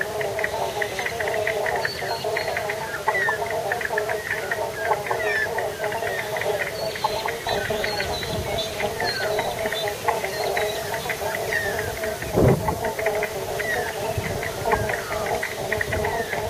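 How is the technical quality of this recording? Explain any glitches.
No glitches or faults heard.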